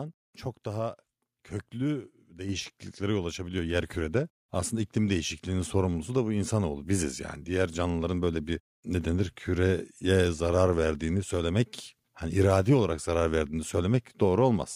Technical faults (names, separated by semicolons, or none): microphone volume stepped up